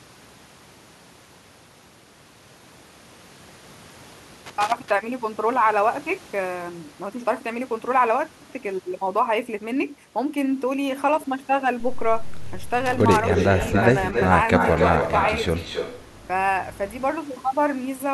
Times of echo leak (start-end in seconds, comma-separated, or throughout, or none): 13.28-14.25, 14.56-16.06